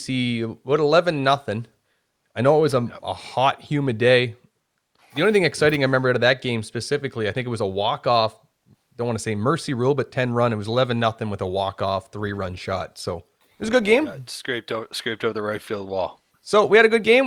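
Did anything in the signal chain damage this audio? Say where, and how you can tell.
Yes, at the network stage: from 12.19 to 14.19 s the speech abruptly picks up codec artefacts, no gap. That's an adaptive stream at a lower bitrate, sounding like Opus stepping down to 24 kbit/s.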